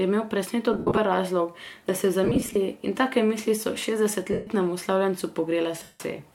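Lost LE Audio frames break up the speech at 0.73–0.98, 2.24–2.56, 4.32–4.47 and 5.82–6.00 s, in gaps that fit 7.5 ms frames. The LC3 decoder fills each gap by reusing the last spectrum with random signs, so the sound smears into noise, fading after the first few frames.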